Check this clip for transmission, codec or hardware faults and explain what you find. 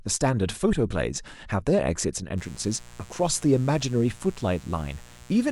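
One hardware fault is audible, a mains buzz. From 2.38 s to the end, a steady raspy buzz sits well beneath the speech. Sharp switching spikes on 60 Hz mains leak in, spraying harmonics into the kilohertz range.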